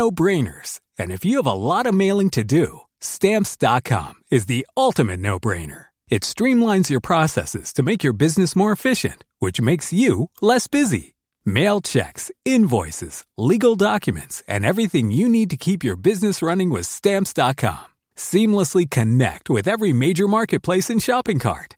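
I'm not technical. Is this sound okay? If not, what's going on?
Yes, no technical faults were found in this speech recording.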